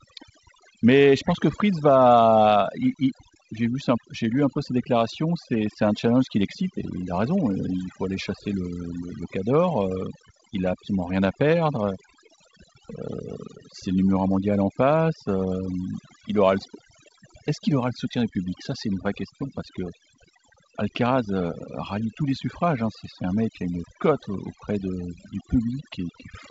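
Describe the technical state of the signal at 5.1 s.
At 5.1 s you're hearing overdone noise removal, which runs through the whole clip. The reducer is pulling individual frequency bands down hard wherever they sit near its noise estimate, taking quiet bits of speech along. So the background drops and breaks up into little twinkling specks. Underneath sits G.722 wideband telephone coding, with nothing above about 7.8 kHz and only light coding damage, which fits 56 kbit/s.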